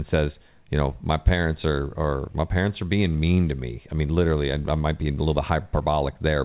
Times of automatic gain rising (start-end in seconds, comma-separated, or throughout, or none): none